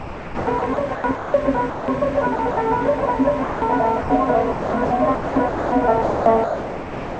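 From 0.00 to 1.34 s the sound is chopped by the voice detector: about 0.8 s of it flickers away into hiss, most likely because the sender's detector kept toggling transmission and the receiver filled the gaps with comfort noise. On a waveform the envelope breaks into ragged pieces. A spectrogram shows detailed, structured energy alternating with flat, featureless noise bands, all stopping at 8 kHz as the call codec's bandwidth limit allows.

At 1.70–1.88 s, 3.44–3.62 s and 4.01–4.10 s the sound is dropped by the voice detector. The detector likely judged quiet material to be background and stopped sending, so 180 ms, 180 ms and 90 ms of sound are lost and replaced by steady synthetic noise. Each gap appears as a low, even block on the waveform and a smooth, texture-less patch on the spectrogram, with the sound snapping back when transmission resumes.

Chopping returns at 2.36–2.57 s (90 ms filled), 4.52–5.72 s (about 0.72 s filled) and 6.02–7.19 s (about 1.0 s filled). 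These stretches give the same stuttering on-off texture.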